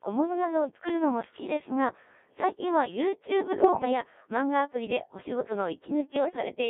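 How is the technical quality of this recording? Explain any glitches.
The recording's technical quality is poor. The speech is heavily processed throughout and breaks up twice.

For the entire clip the voice sounds robotic and buzzy, confined to roughly 250 Hz to 3.6 kHz. This is a Codec 2 vocoder: only pitch, voicing, energy and spectral shape are sent, and the decoder rebuilds speech from sine waves, at a rate that fits about 1.3 kbit/s.

From 3.61 to 3.85 s and again from 6.16 to 6.36 s, the speech jumps in pitch and level and dissolves into warbling gibberish. These are bit errors on digital voice radio. At an error rate of several percent, each corrupted bit scrambles a whole frame's parameters.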